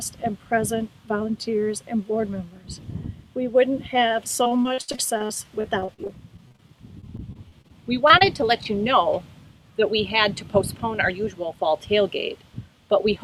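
From 4.43 to 6.69 s, and again from 7.01 to 7.72 s and 8.08 to 8.44 s, the audio suffers repeated packet loss, giving a choppy, robotic sound. Packets kept going missing in quick succession. The receiver filled each hole by extending the last good sound, and the holes came too close together to recover. About a quarter of the first stretch is concealed, and the longest gap is 64 ms. On a waveform these stretches show short copied cycles broken by notches. On a spectrogram they show as thin vertical seams and smeared, frozen harmonic bands.

Between 9.81 and 11.55 s a jitter buffer speed-up plays the audio at about 104% speed with the pitch unchanged. The receiver had built up more buffered audio than it wanted, so it trimmed short pieces a pitch period or so long, many times in a row, removing roughly a tenth of a second. A spectrogram keeps its harmonics at the same frequencies while events sit closer together in time. 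The waveform shows periods quietly cut out.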